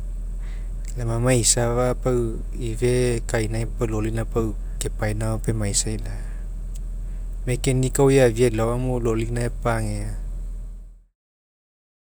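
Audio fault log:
Nothing stood out on listening to the speech, which ends with a smooth fade out that settles by about 11.2 s.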